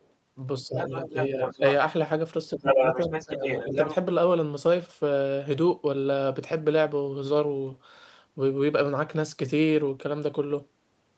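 At 0.02 to 0.09 s, a faint second voice, about 40 dB below the speech, is the other side's voice leaking through, likely residual echo the canceller missed; on a spectrogram it is a barely visible harmonic trace. From 0.66 to 0.76 s the speech dips by about 10 dB: speech suppressed in double talk, likely the canceller ducking both talkers at once, seen as a brief notch in the waveform envelope. The leak returns from 0.77 to 1.73 s at about 5 dB below the speech, with a second set of harmonics overlapping the main voice. Within it, from 1.1 to 1.62 s, the main voice is again pulled down by about 10 dB in patches. From 2.56 to 3.45 s the speech is suppressed once more, while the leak from 2.57 to 3.95 s sits at roughly equal level, so the two voices' harmonic stacks interleave densely on the spectrogram. A final short dip of about 10 dB comes at 3.67 to 3.75 s. Throughout, the band stops at 8 kHz, as expected from the call path.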